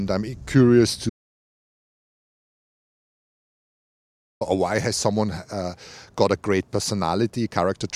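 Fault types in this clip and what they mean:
Audio dropout to silence: the speech cuts off after "I'm curious" at 1.10 s and returns mid-flow at "or why has someone" at 4.41 s, leaving 3.3 s of silence with no room tone, likely from lost input while recording continued.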